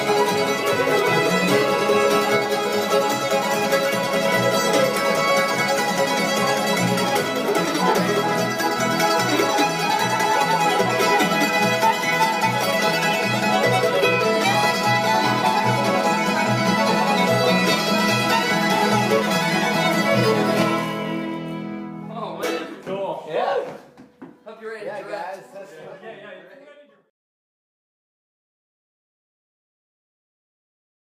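Nothing technically wrong can be heard anywhere in the audio. There are no faults to report and no times to give.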